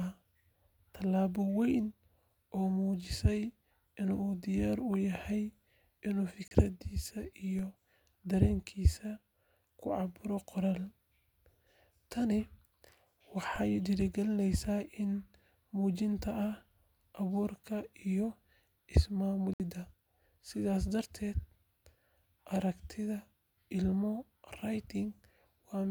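At 6.48 to 6.52 s the speech falls into a brief silent hole, a digital broadcast dropout: the receiver muted when a frame failed, and about 32 ms of sound is simply gone. Unlike a click, nothing is heard in the gap.

At 7.59 s and again at 13.56 s a DC step shifts the waveform's zero line. Each is heard as a low thump, then the offset bleeds away as if through a 20 Hz high-pass. The speech carries straight through, with nothing missing.

A longer dropout at 19.54 to 19.60 s mutes the speech again, which fits two lost frames totalling about 64 ms. It is a clean gap, not a thump over continuing sound.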